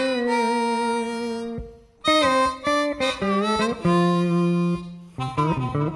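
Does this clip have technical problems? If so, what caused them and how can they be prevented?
No, there are no technical problems to point to in this clip. Nothing in the audio calls for a cause to be traced or a fix to be made.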